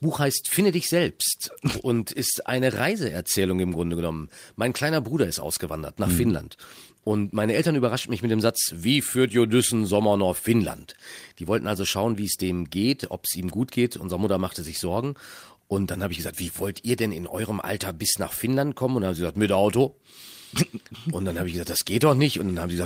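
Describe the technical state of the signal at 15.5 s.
At 15.5 s the speech signal is intact, with no audible fault at that moment.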